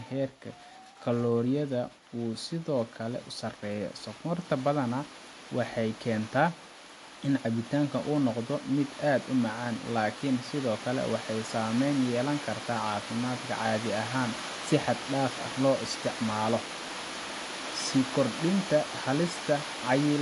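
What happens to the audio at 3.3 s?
At 3.3 s the speech carries the same damage it has from start to finish: it was likely squeezed through MP3 compression at a low bitrate, consistent with something near 48 kbps. Short of bits, the encoder discarded everything above about 11.3 kHz and zeroed faint frequency lines that flicker in and out between frames. The speech therefore sounds dull at the top, with a plainly audible watery swirl, chirpy sibilants and softened consonant attacks.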